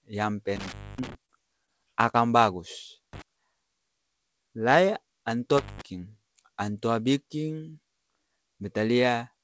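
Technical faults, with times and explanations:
0.56–1.15 s, 3.13–3.22 s and 5.58–5.81 s, intermittent contact: a loose plug or cable briefly opens, so the speech drops out with crackle at each edge and only faint hiss underneath. The gaps last about 250 ms, 36 ms and 170 ms.
0.96 s, 1.26–1.37 s, 1.66–1.69 s and 2.11–2.15 s, short concealed packet loss: roughly 20 ms of call audio never arrived each time. The receiver patched the gap by extending the preceding sound and blending back, which you hear as a quick smear or wobble.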